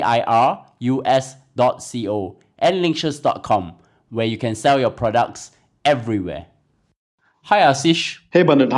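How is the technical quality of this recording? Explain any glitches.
Nothing technical gets in the way here; the speech runs along without any glitches to point to.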